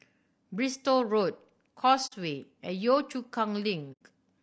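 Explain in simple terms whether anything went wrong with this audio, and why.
The speech sounds rough and grainy throughout. The likely cause is low-delay AAC compression, the kind used in video calls, squeezed too hard.

There are two brief soft gaps, at 2.06 to 2.13 s and at 3.92 to 4.02 s. This is AAC frame loss with muting: chunks of audio went missing and the decoder filled them with silence, fading smoothly out and back in.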